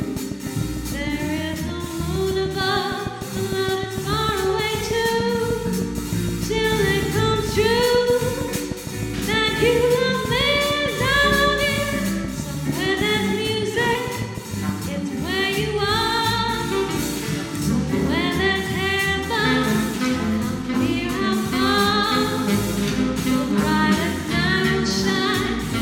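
From 0.02 s to 14.70 s a steady ticking rides over the sound, roughly a hundred sharp, near-identical clicks at a regular 6.5 per second, popping out well above the audio and audible in pauses too. This train of clicks likely comes from interference from nearby equipment or a faulty connection or power supply.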